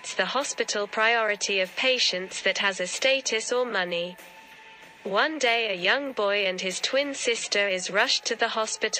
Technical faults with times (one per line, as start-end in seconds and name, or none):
2.95 corrupt frame decoded